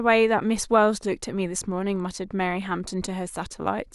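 A short recording of speech, with nothing technically wrong to be heard anywhere in it. No dropouts, glitches, level problems or other faults turn up at any point.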